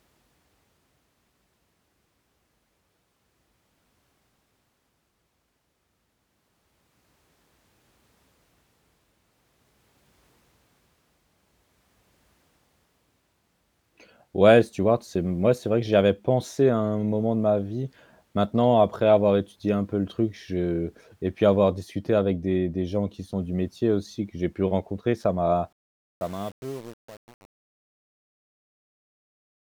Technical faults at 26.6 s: truncation distortion on a fade

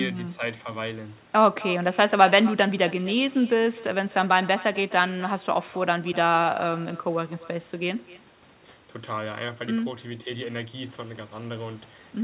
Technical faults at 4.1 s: echo with no canceller

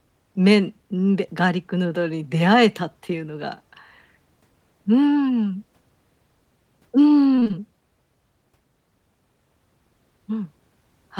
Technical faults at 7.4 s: repeated packet loss (robotic sound)

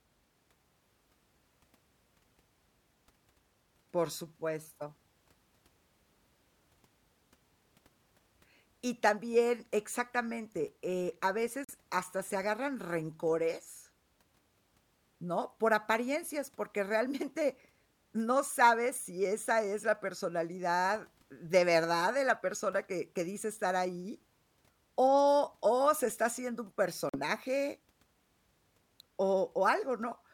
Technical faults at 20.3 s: none

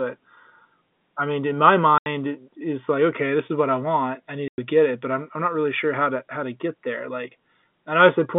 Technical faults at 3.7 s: none

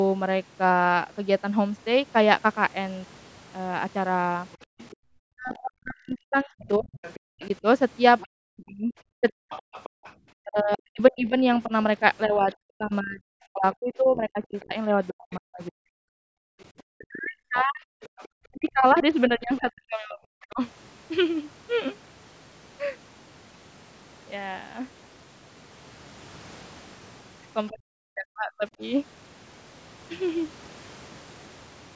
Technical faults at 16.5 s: speech suppressed in double talk; other side's voice leaking through; background gated by the echo canceller

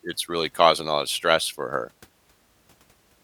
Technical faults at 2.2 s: damaged data in a compressed stream

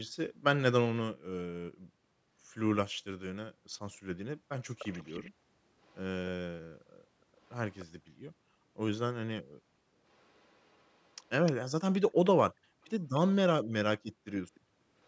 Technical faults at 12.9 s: echo leak

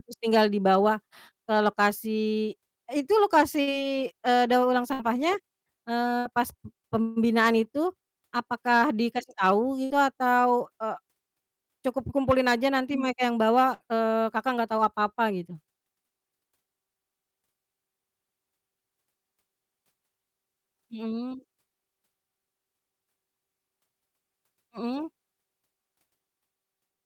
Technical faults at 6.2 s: burst of packet loss

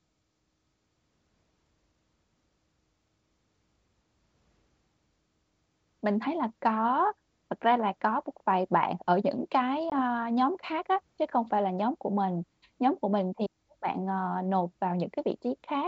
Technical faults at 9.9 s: packet loss on an ADPCM call

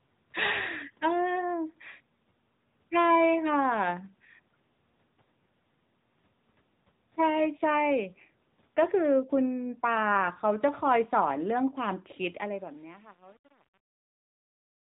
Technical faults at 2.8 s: AMR narrowband mobile codec

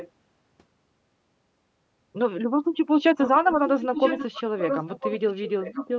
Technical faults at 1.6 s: none

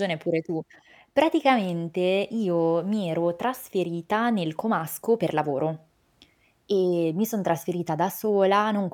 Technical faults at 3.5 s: none

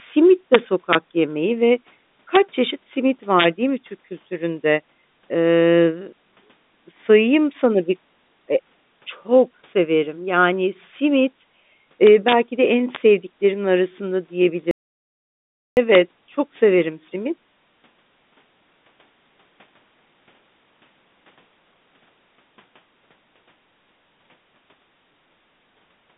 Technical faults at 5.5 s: none

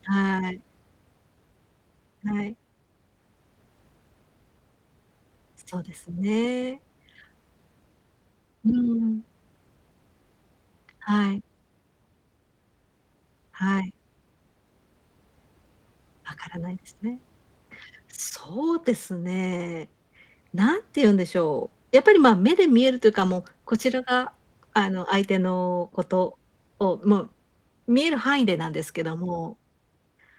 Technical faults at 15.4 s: none

